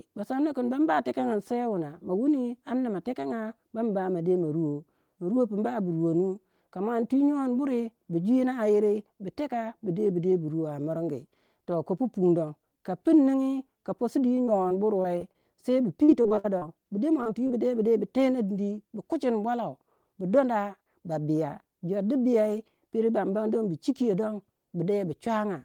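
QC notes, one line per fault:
14.45–15.36 s and 16.04–16.63 s, repeated packet loss (robotic sound): five gaps in each stretch, the longest 24 ms in the first and 57 ms in the second (about 29% of that span patched), ending just before "bu de". Each hole is bridged by extending the preceding sound, so the speech turns choppy. On a spectrogram, harmonics freeze into flat, smeared bands between clean frames. The waveform shows repeated, too-regular cycles.
17.23 s and 17.47 s, short concealed packet loss: two holes of about 20 ms each, the first just after "bu de". The decoder continues the last pitch period or shaped noise, then fades back into real audio, giving a brief smear or wobble. A spectrogram shows a tiny blurred patch with a seam at each edge.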